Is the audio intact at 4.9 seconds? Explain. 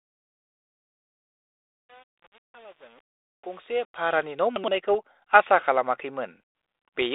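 No. At 4.86 s, bits flipped on the 32 kbit/s G.726 ADPCM link, at an error rate of a fraction of a percent. These bit errors on an ADPCM link throw off the decoder's step size and predictor, so the damage rings on for a few milliseconds. The speech gets a short pop and rough burst with a brief change in level.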